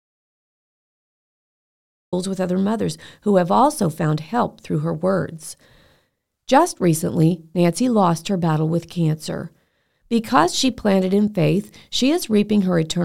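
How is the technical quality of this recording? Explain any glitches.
The recording opens with a glitch. From the start until 2.13 s there is an audio dropout to silence, likely from the input being lost while zeros kept being written. The speech cuts in abruptly at "with other mothers who". The gap is silent with no room tone, which sets it apart from a natural pause or a gated quiet passage.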